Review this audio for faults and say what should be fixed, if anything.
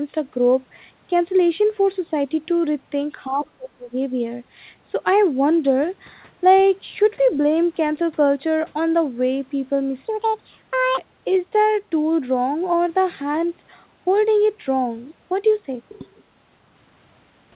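Between 3.28 and 3.97 s the speech dips by roughly 30 dB. The likely cause is speech suppressed in double talk, where the echo canceller turned the talker down along with the echo. On the waveform the envelope collapses, and the spectrogram shows a near-empty gap in the harmonics. Prevention: tune the echo canceller's double-talk detection so near-end speech is kept rather than attenuated.

From 6.57 to 6.63 s, a faint second voice sits far below the speech level. This is likely the other side's voice leaking through, residual loudspeaker echo the canceller missed. It shows as a thin, weak trace beneath the main harmonics, under the 4 kHz ceiling of the G.711 path. Prevention: strengthen residual echo suppression or lower the loudspeaker level.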